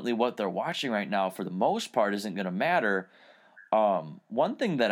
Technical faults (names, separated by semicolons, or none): none